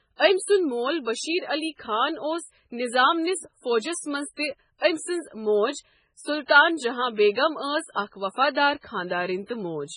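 Throughout, the speech sounds watery and swirly, with nothing above about 10.5 kHz, heavy damage that is likely MP3 compression at a starved bitrate around 16 kbps.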